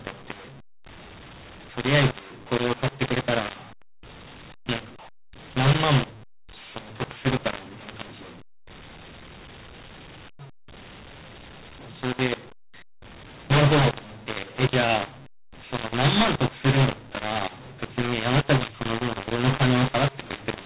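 From the start of the speech to the end, the audio shows a mu-law and A-law mix-up: the G.711 signal was coded as A-law but decoded as mu-law. Because the two logarithmic curves differ, sample levels are remapped wrongly, some pushed too loud and others too soft, and the quietest values are raised well above zero. The result is harsh, gritty distortion on the speech and a noise floor that fills every pause, within the 4 kHz bandwidth of the telephone coding.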